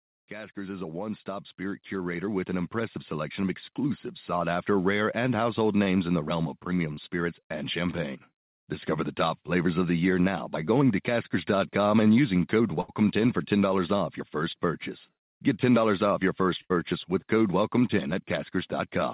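From 0.31 to 4.11 s, automatic gain rising lifts the level by about 13 dB, so the voice and background swell together as the control compensates for quiet input. Short concealed packet loss follows at 5.84 to 5.88 s and 6.94 to 7.10 s: roughly 20 ms of audio failed to arrive each time, and the receiver patched the gap by extending the preceding sound, heard as a brief smear or wobble. Bursts of packet loss at 12.81 to 12.90 s and 16.62 to 16.72 s each drop about 80 ms. The concealment holds the last sound as a fading buzz or hiss before the speech resumes further on, with that stretch missing from the narrowband, 4 kHz-limited call audio.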